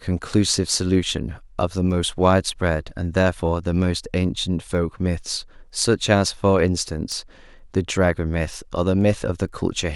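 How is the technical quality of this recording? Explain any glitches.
The recording has one clear glitch. From 0.48 s to 9.49 s, word clock ticks repeat about every half second, around twenty in all. An unlocked receiving clock, roughly 40 ppm off, slips one sample each time, causing sharp ticks.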